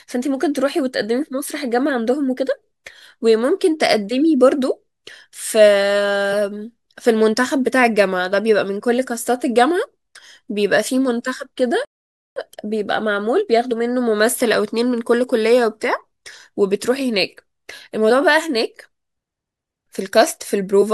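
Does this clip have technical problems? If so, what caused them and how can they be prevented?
Yes. There are three brief bursts of damaged data in a compressed stream, at 1.88 s, 13.70 s, and from 20.81 to 20.83 s. Each is a short chirp or blip cutting into the speech. At these points some bytes of the encoded stream were wrong. The decoder misread those frames, lost sync, and skipped ahead to the next valid frame header. Storing and transmitting the file with checksums or error correction would prevent it.

There is also a playback stall from 11.85 to 12.36 s. The speech stops mid-flow and the output goes silent for about 0.51 s. Then it resumes. The likely cause is that the player ran short of data, or its audio thread was blocked for that half second. The silence lasts until the buffer refills. A larger playback buffer, and keeping the audio thread free of blocking work, would prevent it.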